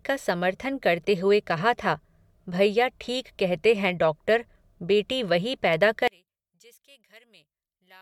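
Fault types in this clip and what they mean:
One channel inverted: from 6.08 s to the end, the speech collapses by about 31 dB, leaving only a faint residue, which is likely one stereo channel with reversed polarity cancelling the centred voice when the channels are summed to mono. Unlike a dropout or a plain gain drop, the sound does not go silent or just quieter; what survives is the small difference between the channels.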